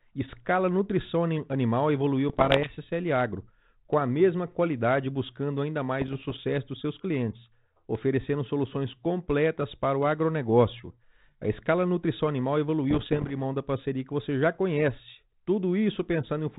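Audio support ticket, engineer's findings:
Bit errors on an ADPCM link: pops and rough bursts with brief level jumps at 2.29–2.74 s after "escala nutrição animal evoluiu", 6.00–6.40 s between "mesma qualidade buscando ainda" and "dos seus clientes oferecendo", and 12.90–13.34 s between "escala nutrição animal" and "mão da parceria que". The third burst is densest, with an error rate higher than the others. Each flipped bit knocks the decoder's step size and predictor off, so the damage rings on for milliseconds. Unlike packet loss, there are no silent gaps. The G.726 path fits 32 kbit/s, with the band capped below 4 kHz.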